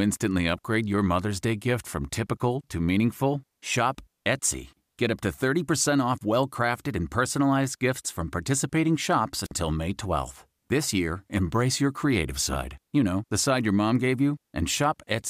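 A speech recording with one wireless microphone squelch dropout, from 9.44 to 9.52 s. There is a brief burst of hiss. The sound then falls into a hole of near silence lasting about 50 ms, and the speech comes back. The radio link from an analogue FM microphone faded for a moment. The receiver's squelch read the weak carrier as lost and muted its output, then reopened once the signal recovered.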